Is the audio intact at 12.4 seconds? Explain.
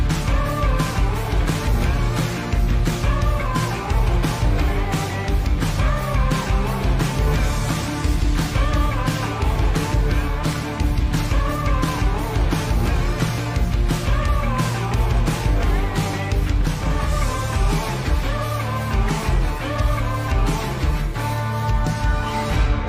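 Yes, at 12.4 seconds the audio is intact, with no dropout, click, glitch or other fault to be heard at that moment.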